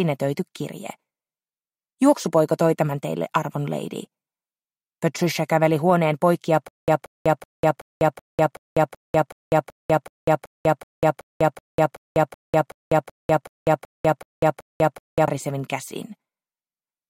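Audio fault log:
6.68–15.28 s: stutter with silent gaps. A 180 ms burst repeats every 377 ms with about 197 ms of dead silence, likely a stalled stream replaying its last fragment.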